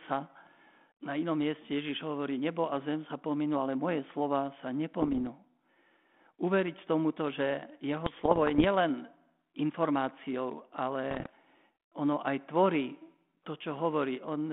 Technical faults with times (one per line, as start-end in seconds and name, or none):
5.01-5.27 bit errors on an ADPCM link
8.06-8.65 bit errors on an ADPCM link
11.10-11.31 bit errors on an ADPCM link